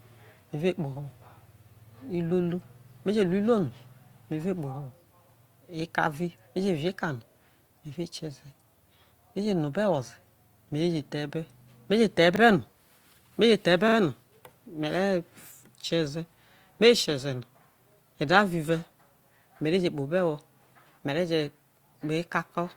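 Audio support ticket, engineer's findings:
Repeated buffer at 7.32–7.36 s, 12.36–12.40 s and 13.88–13.96 s. Playback device underrun: a 40 ms block replays once, twice at 13.88 s, giving a short stutter with hard joins. No gap or skipped material, which rules out a dropout.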